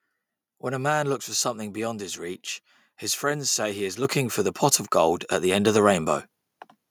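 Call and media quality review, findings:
Microphone volume stepped up at 4.05 s: speech and background noise jump together by about 7 dB, with no fade. Component: capture-side automatic gain in the call client. Mechanism: input judged too quiet, so the device input volume was raised in one step.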